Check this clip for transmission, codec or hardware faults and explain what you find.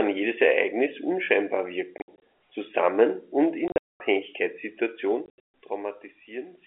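The speech drops out in short silent holes three times: 1.98 to 2.20 s just before "zusammen und", 3.68 to 4.00 s just after "zusammen und", and 5.26 to 5.47 s. The gaps have hard edges. The longest are about 220 ms at 3.68 s and 140 ms at 5.26 s. This is packet loss filled with silence. Lost packets, which fit a 20 ms packet length, were replaced by nothing instead of concealment, so the audio cuts abruptly in and out. The narrow telephone band from the G.711 coding stays audible throughout.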